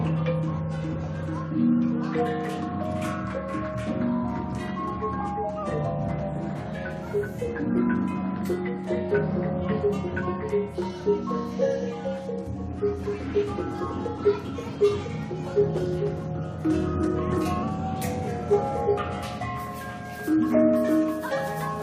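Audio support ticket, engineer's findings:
Drift correction step, two events. Clock-matching resampler likely stepped playback rate to manage its buffer. 5.63–6.59 s: slowed 5.56%, pitch down 99 cents, about a semitone. 17.63–18.28 s: sped up 5.56%, pitch up 94 cents.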